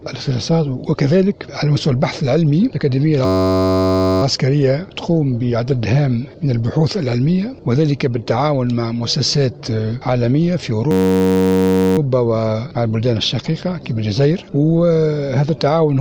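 A system hang loop occurs at 3.25–4.22 s and again at 10.91–11.98 s: a frozen driver replays one 10.67 ms buffer, consistent with 512 samples, producing a steady 93.8 Hz buzz.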